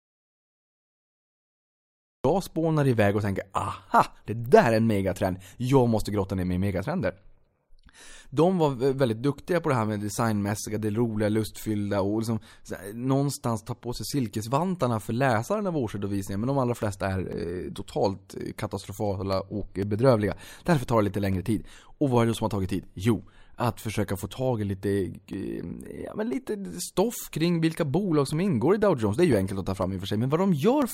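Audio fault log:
0.00 to 2.25 s: audio dropout to silence, already under way when the clip opens. The opening is silence with no room tone, so it is not a quiet passage. It likely comes from a lost input that kept writing zeros. Speech resumes at "spånar iväg och tänker".
16.82 to 30.82 s: periodic USB or driver dropouts, starting after "de allra". About 1 ms of audio drops to silence every 0.5 s, which gives around thirty evenly spaced ticks heard only over speech. The strict regularity sets them apart from a one-off dropout.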